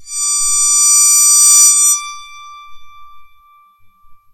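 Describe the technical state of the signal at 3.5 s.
At 3.5 s the music plays through intact, with no audible fault in the signal at that point.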